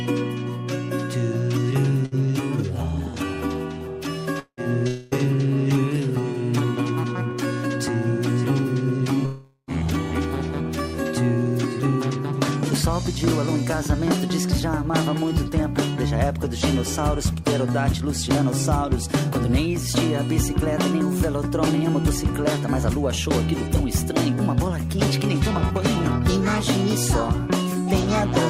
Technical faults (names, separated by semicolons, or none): burst of packet loss; long network dropout